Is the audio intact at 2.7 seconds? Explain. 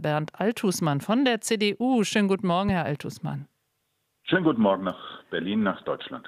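No, there's a loud pop from about 2.69 to 2.71 s, a single sharp thump sitting roughly 10 dB above the surrounding sound, which carries on underneath. It's likely a sudden voltage spike from a plug, switch or static, shaped by the downstream circuitry.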